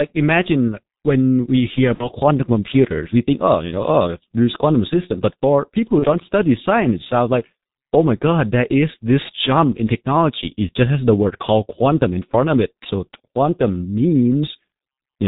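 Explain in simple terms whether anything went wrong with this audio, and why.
The whole recording sounds heavily muffled and hoarse, with blurred consonants and no crisp high end. That is the G.723.1 codec, an early internet-phone format that cuts everything above 4 kHz and tracks the voice only in coarse 30 ms steps.

Twice the speech briefly smears into a buzzy or noisy stretch that fades. This is VoIP packet loss concealed by the speech codec. From 1.94 to 2.10 s, between "imagine when we hear" and "quantum computers we think", about 60 ms went missing. At 5.99 to 6.05 s, between "but for people who" and "study science it sounds", about 30 ms went missing. Both gaps match whole 30 ms frames. The decoder filled each gap by stretching the last sound it had, and the voice takes a moment to recover afterward.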